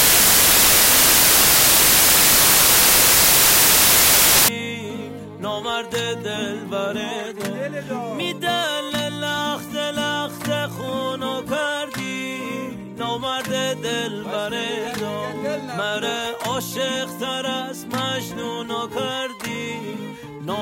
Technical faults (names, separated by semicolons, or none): samples built from the wrong bytes